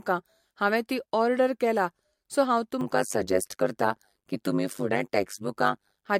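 Generation loss runs through the whole clip: the speech sounds swirly, smeared and hollow, with blurred attacks. The likely cause is repeated lossy re-encoding, which fits about three MP3 passes near 68 kbit/s, each adding fresh quantisation noise on a shifted frame grid.

Overlap-add ripple appears from 2.81 s to 6.08 s, just after "ओर्डर केला सो हांव". Windowed frames were rejoined with an overlap whose gains don't sum evenly, so the level dips by about 60 dB once per frame, giving a metallic buzz at around 100 Hz with extra tones around each note.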